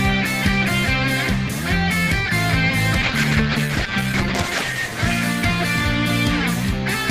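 A call bitrate drop runs from 3.05 to 6.27 s: the audio turns watery and muffled as the encoder loses bits, which fits a fall from 40 to 11 kbps, worst for about 1.6 s. Unlike packet loss, there are no gaps or clicks, just coarseness.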